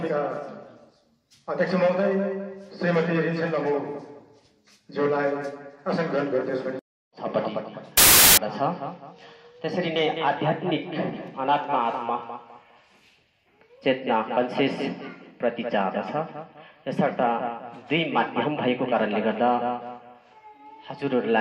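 From 7.97 to 8.37 s there is a burst of wrong sample width. For about 0.4 s, the audio loses its normal character. The pattern fits data stored as 32-bit integers but read back as packed 24-bit integers. Most output values are stitched from bytes of neighbouring samples, so they become loud noise. Only some keep the true top bits, and the original sound sits faintly beneath the noise. It runs at 0.75 times normal speed, so its pitch drops.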